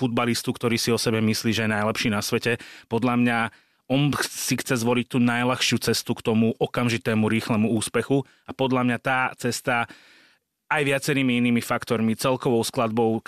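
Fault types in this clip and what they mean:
Nothing to flag here: I can't hear any technical fault anywhere in this speech recording.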